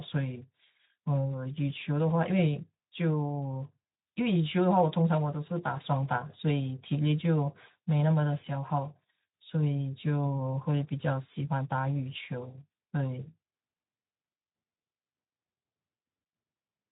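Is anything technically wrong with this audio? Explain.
No, nothing in this speech clip stands out as a technical fault; it carries the light coding character expected of Speex at a moderate setting, consistent with roughly 15 kbps.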